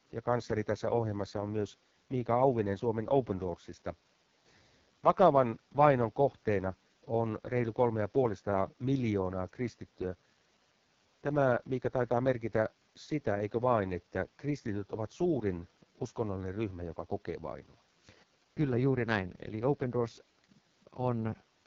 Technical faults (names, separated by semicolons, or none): AMR wideband (HD Voice) codec